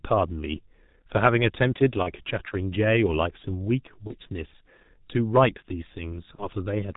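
G.723.1 codec damage runs through the whole speech clip. The band stops at 4 kHz, so the speech sounds muffled and hoarse, and consonants smear because the codec's voice model updates only once per 30 ms frame. The damage is heavy, at 6.3 kbit/s.

VoIP packet loss concealed by the speech codec occurs three times: at 2.03 to 2.12 s, at 4.07 to 4.14 s and at 6.35 to 6.48 s. Each fits a single lost 30 ms frame. The decoder fills each gap by repeating its last pitch and filter at falling gain, so the sound blurs into a short buzzy tone or coloured noise that fades. Because each frame builds on the one before, the speech stays weak or distorted beyond the gap itself, and at 6.35 s the disturbance lasts about 130 ms.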